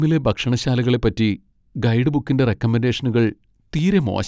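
Speech recording with no technical faults to be heard.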